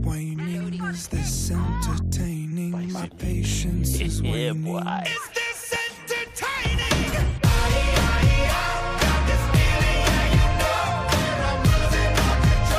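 No technical faults can be heard at any point in the recording.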